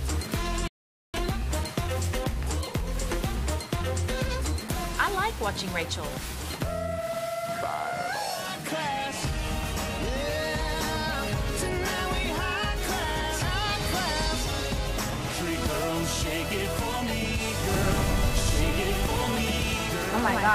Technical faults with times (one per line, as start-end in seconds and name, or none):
0.68-1.14 rebuffering stall
17.69-20.54 doubled audio track